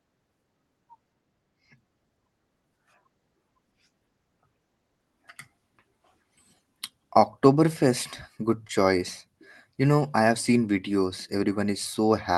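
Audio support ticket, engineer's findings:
Short concealed packet loss at 8.67–8.71 s: brief smear. Jitter buffer missed about 20 ms, decoder filled it by extending the last sound, then blended back. Opus call path underneath, top end stops around 12 kHz.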